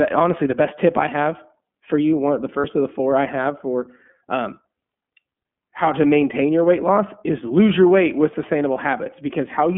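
The whole clip carries iLBC codec coding. The speech sits in a 150 Hz to 3.4 kHz band, sounding slightly rough and synthetic. The 30 ms framing fits a bitrate near 13 kbps.

From 2.61 to 2.65 s there are lost iLBC frames. The decoder bridges the gap by repeating the last pitch cycle, so a brief buzzy held vowel is heard. The gap fits a single 30 ms frame.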